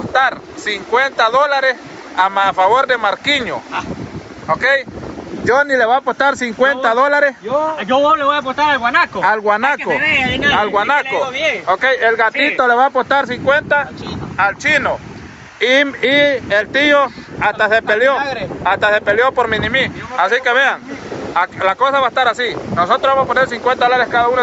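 Gain pumping runs through the whole clip. The gain ducks by around 10 dB under each loud sound, likely because the input gain is set far too high and a fast limiter clamps it. The top end stops near 8 kHz, which fits the call's codec bandwidth.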